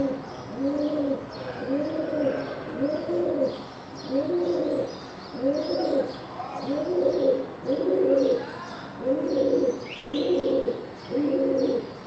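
From 9.93 to 10.67 s, audio packets repeatedly failed to arrive in time, and the receiver bridged each hole by stretching out the last sound it had. That is repeated packet loss, giving a robotic sound: four gaps fall in that stretch, the longest about 160 ms, with roughly a third of the span filled in. The result is a choppy, robotic stutter with fragments of the sound missing, heard against the call path's 8 kHz bandwidth ceiling.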